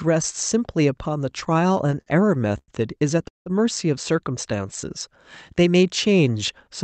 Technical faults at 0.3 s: none

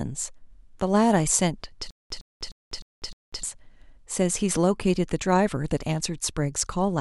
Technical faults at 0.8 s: none

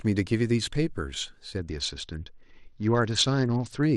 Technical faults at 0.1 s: none

